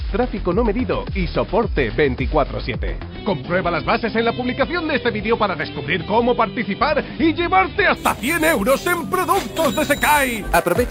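From 7.97 s to the end, a bright, metallic fizz rides on top of the sound, rising and falling with its level. This is imaging from sample-and-hold upsampling. The material was brought up to 48 kHz by repeating each sample with no smoothing filter, which leaves mirrored copies of the spectrum. The first image sits between roughly 5.5 and 11 kHz at about -15 dB relative to the signal, which points to an original rate near 11 kHz.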